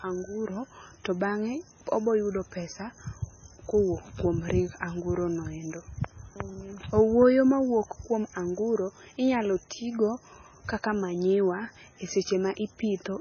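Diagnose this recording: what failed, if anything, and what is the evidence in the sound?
Codec stage: likely heavy MP3 compression, fitting about 16 kbps. Throughout, nothing survives above 6.5 kHz, and starved frequency lines flicker, making the speech watery.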